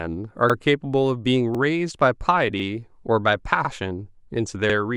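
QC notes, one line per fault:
0.50–0.55, 1.55–1.60, 2.60–2.65, 3.65–3.70 and 4.70–4.75 s: overlapping chunks. The speech is delivered in 1.0 s blocks, and each new block begins 50 ms before the previous one finished, so that 50 ms of audio plays twice at every join. The doubled fragment produces a brief stutter or click at each boundary, recurring at a steady interval of about 1.05 s, the block length plus the replayed overlap.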